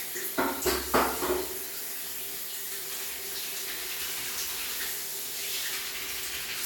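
No technical faults are audible.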